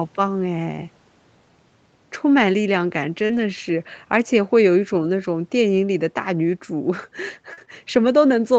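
Brief smears and wobbles interrupt this speech recording at 3.25 to 3.31 s, 7.53 to 7.59 s and 7.65 to 7.69 s, where a short consonant can drop out. These are short concealed packet loss. About 40 ms of audio was missing at the first two points and about 20 ms at the third. The receiver covered each hole by extending the preceding sound and then blended back into the real signal. Overlapping and following these gaps, the sound turns rougher and noisier from 3.29 to 3.39 s and from 7.57 to 7.63 s, with a shorter rough patch at 4.43 to 4.45 s. These are lost packets rebuilt from error correction. The 60 ms, 40 ms and 20 ms stretches fit runs of three, two and one 20 ms Opus frames. The decoder replaced each lost frame with the low-bitrate copy carried in the next packet, so there is no gap, only the coarser copy. Across the whole clip the call path, with Opus at 32 kbps, leaves nothing above 8 kHz.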